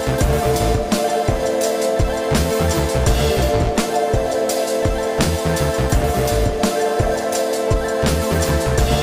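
At 4.83 s, DAB burbling: weak-reception bit errors, around a tenth of a percent, slip past error correction into the MP2 data, putting brief noise blips into individual sub-bands.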